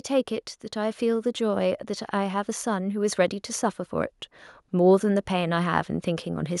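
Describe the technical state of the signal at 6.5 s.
At 6.5 s the speech signal is intact, with no audible technical fault.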